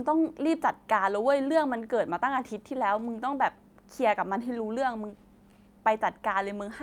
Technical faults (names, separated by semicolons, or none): clock drift between sender and receiver; repeated timing corrections